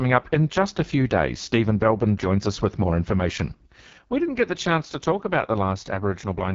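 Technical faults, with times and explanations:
Throughout, AMR wideband (HD Voice) codec: The speech sounds rough and raspy for the whole clip. Nothing is heard above 7.3 kHz. The codec models the vocal tract and drives it with sparse pulses up to 6.4 kHz. It fills the top band with shaped noise. The heavy damage fits its lowest rate, 6.6 kbit/s. At that rate too few pulses remain to rebuild the voice cleanly.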